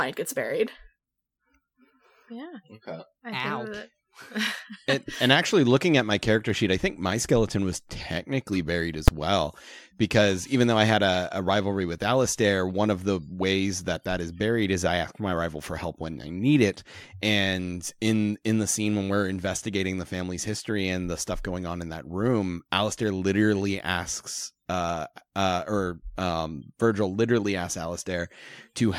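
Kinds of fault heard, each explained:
Invalid numbers at full scale: a failed calculation pinned a 5.3 ms block to maximum output, heard at 9.08 s as one very loud bang rather than a silent dropout.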